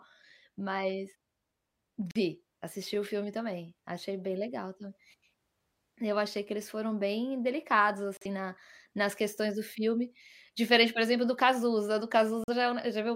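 Three brief digital broadcast dropouts hit this speech, at 2.11–2.20 s just before "assisti o filme também", at 8.17–8.26 s between "eles foram bem delicados" and "na nas questões do", and at 12.44–12.54 s. Each time the receiver mutes a short hole, consistent with one lost 43 ms frame, and that bit of audio is simply gone.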